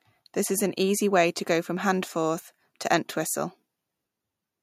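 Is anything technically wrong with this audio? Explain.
No, nothing technically wrong.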